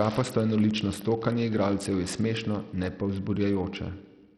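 Bluetooth SBC compression runs from 0 s to the end. The damage is heavy. The treble thins and flickers in and out, and a gritty, aliased noise clings to the speech. This is likely the result of a starved bit pool, where the weak upper sub-bands get few or no bits and the rest are quantised coarsely. The degree of loss points to a low rate, on the order of 64 kbps.

Wi-Fi interference sits under the speech from 0 s to 2.65 s and stops just before "ne pa". A nearby radio's bursts are rectified by the audio circuit and leak into the signal. The beacon, every 102.4 ms, gives a steady tick roughly ten times a second. The ticking stays well below the speech, around 20 dB down.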